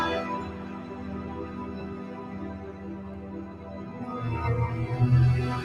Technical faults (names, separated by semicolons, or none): noise suppressor applied to music or sounds